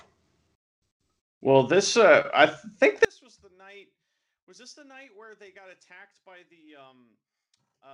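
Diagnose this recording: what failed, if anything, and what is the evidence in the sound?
From 3.05 s, right after "this uh I think", the speech level falls by about 34 dB and stays down to the end, leaving a faint residue. On a waveform the envelope collapses abruptly; a spectrogram shows the energy nearly vanishing across the band. The likely cause is one channel inverted, probably a polarity swap in analogue wiring: once the two channels are summed to mono, what they share cancels and only their small difference survives.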